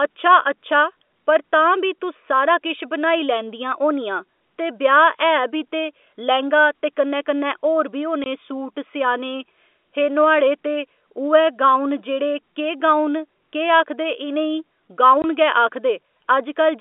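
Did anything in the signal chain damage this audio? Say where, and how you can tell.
Yes. At the network stage, packets went missing and the receiver inserted silence. Two hard-edged 20 ms gaps, which fits one lost packet each, sit at 8.24 to 8.26 s, between "कन्नै कन्नै होर बी" and "सूट सेआने", and at 15.22 to 15.24 s, over the telephone-band G.711 audio.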